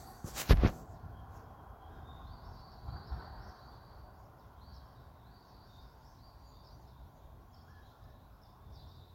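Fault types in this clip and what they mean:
No technical faults can be heard anywhere in the recording. The sounds come through without any dropout, distortion or timing disturbance to point to.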